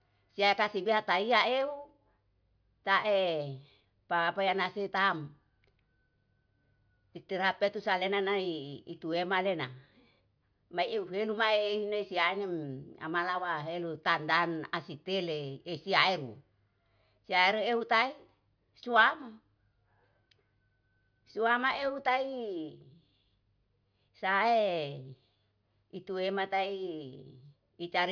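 No technical faults can be heard anywhere in it.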